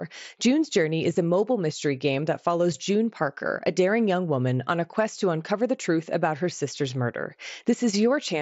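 At 1.14 s and again at 2.23 s the speech has a brief, nearly hidden smear, a tiny repeated sliver instead of a gap. This is concealed Bluetooth headset packet loss: about 7.5 ms, consistent with a single lost packet, was patched over with recent matching waveform, alongside the light grain of the mSBC link.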